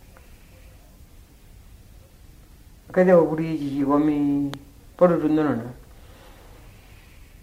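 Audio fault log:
4.54 to 4.56 s, loud pop: a single sharp pop about 10 dB above the surrounding level, over in roughly 20 ms, with the sound continuing underneath; the likely cause is a brief voltage pulse, from a switch, plug or static discharge, entering the signal chain.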